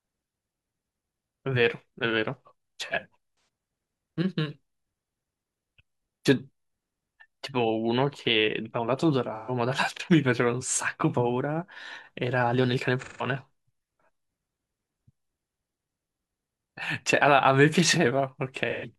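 Speech with AAC frame loss and concealment: smeared, noisy patches of about 0.13–0.17 s at 3.31, 9.35, 13.02 and 18.70 s, as the decoder extrapolates the missing spectrum.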